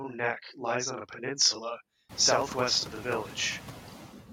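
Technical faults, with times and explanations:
Throughout, channel delay (doubling): one channel runs 40 ms late and is summed to mono, so each syllable arrives twice as a close doubling rather than a distinct room echo.
Throughout, noise suppressor artifacts: background noise is pulled down by about 4 dB in varying bands, leaving residual noise that dips between phrases, unlike steady room noise, which rises around 2 s.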